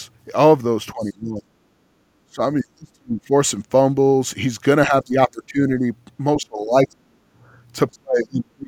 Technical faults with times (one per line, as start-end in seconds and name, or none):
0.92-1.46 speech suppressed in double talk
1.03-1.11 other side's voice leaking through
1.74-2.00 background gated by the echo canceller
2.28-3.31 speech suppressed in double talk
4.86-5.87 speech suppressed in double talk
6.36-7.21 speech suppressed in double talk
7.49-7.54 background gated by the echo canceller
7.92-8.68 speech suppressed in double talk